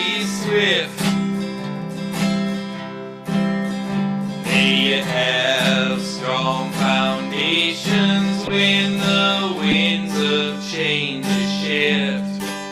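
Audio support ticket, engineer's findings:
Corrupt frame decoded: short chirp/noise bursts at 3.98–4.00 s, 8.47–8.52 s and 9.68–9.74 s, one to a few frames each. Decoder played frames with flipped bits, so misread gains and codes put energy at wrong frequencies. Peaks rise from about -20 dBFS to near full scale.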